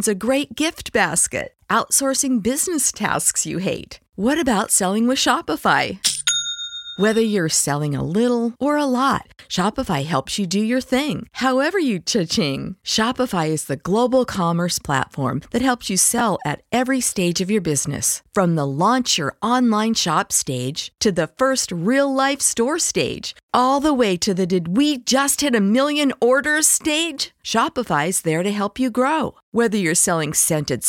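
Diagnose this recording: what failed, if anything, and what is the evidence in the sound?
A brief jumbled flicker at 16.18 to 16.21 s, between "helps you" and "at every stage of", is chunks out of order at the driver or buffer stage. One chunk of about 11.6 ms plays one slot late, leaving three hard joins.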